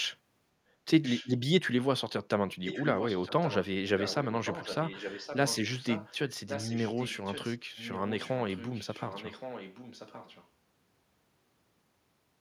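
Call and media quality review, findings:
Echo leak in speech. A delayed copy of the talker returns 1.12 s after the original. It is heard at 1.04–1.29 s, 2.64–3.67 s, 3.98–4.27 s, 4.45–6.15 s, 6.48–7.58 s and 7.76–10.48 s. It sits roughly 10 to 15 dB under the direct speech and is strongest between 2.64 and 7.58 s. The likely cause is a far-end loudspeaker feeding its own microphone, with the echo canceller not subtracting it. The residual is sent back into the call.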